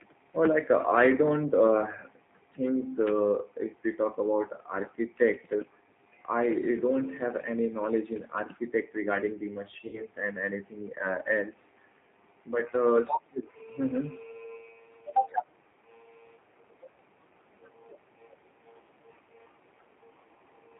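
G.729 codec damage runs through the whole speech clip and is plainly audible. The speech is rebuilt from a vocal tract filter, a pitch predictor and a few pulses per 10 ms frame, which leaves it rough and faintly synthetic, with nothing above 4 kHz. That thin, rough quality fits an 8 kbit/s G.729A stream.

VoIP packet loss concealed by the speech codec occurs from 9.87 to 10.03 s, just after "regarding the" and before "and anything". About 60 ms of audio went missing, consistent with three lost packets. The decoder extends its last pitch and filter at falling gain, giving a brief fading smear, and the speech stays weak or distorted for tens of milliseconds after the packets return.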